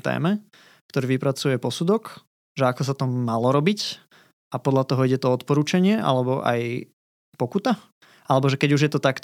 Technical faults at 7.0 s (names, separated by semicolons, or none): none